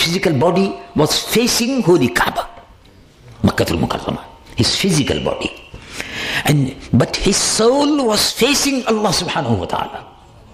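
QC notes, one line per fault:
1.35–10.40 s, clock drift buffer slips: a click recurs every 1.29 s, around seven in all, while sound is present. It is likely two devices with clocks a few hundred ppm apart, with the buffer periodically dropping or repeating roughly 15 samples.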